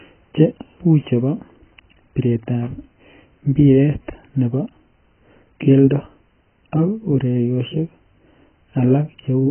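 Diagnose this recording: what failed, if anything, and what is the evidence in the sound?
The codec stage failed, likely through AAC compression at a very low bitrate. Nothing survives above about 3.1 kHz throughout, so the speech sounds dull and muffled, and heavy quantisation smears sibilants into a fizzy, warbling texture, which fits AAC-LC near 12 kbps.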